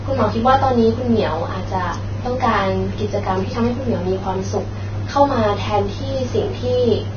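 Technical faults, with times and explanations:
Throughout, likely Vorbis compression: the speech has nothing above about 6.5 kHz, and the remaining treble is hissy and grainy, with consonant onsets smeared and tones roughened. This fits heavy damage at a low setting, around 18 kbps. The codec keeps a smooth spectral envelope but quantises the detail above it so coarsely that fine structure becomes noise of similar energy. It also discards the top band outright to save bits.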